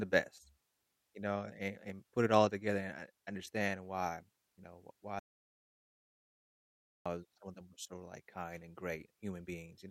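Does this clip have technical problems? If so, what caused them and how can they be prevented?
Yes. Likely a lost input link or mute left the recorder writing silence: an audio dropout to silence from 5.19 to 7.06 s erases about 1.86 s of speech, with no room tone. Monitoring input levels and securing cables and connections prevents it.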